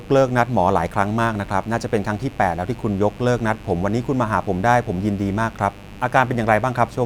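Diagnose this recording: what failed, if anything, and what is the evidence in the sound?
Mains buzz runs through the whole recording as a steady, raspy buzz about 20 dB below the speech, built on 50 Hz. It enters in the analogue wiring, where a dimmer, rectifier or poor shielding injects sharp switching spikes twice per mains cycle.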